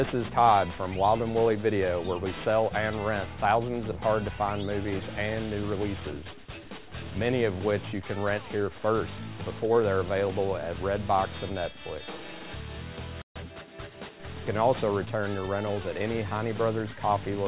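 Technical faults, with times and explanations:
Throughout, aliasing: content above 4 kHz folds back into the band as wrong, gritty tones roughly 20 dB down, which fits downsampling to 8 kHz without filtering.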